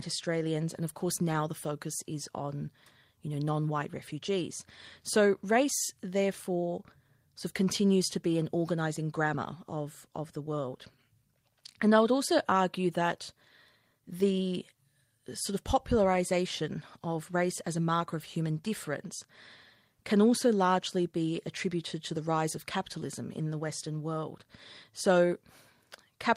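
No technical faults can be heard in this speech recording. There is nothing to place on a timeline, since no event interrupts or alters the sound at any point.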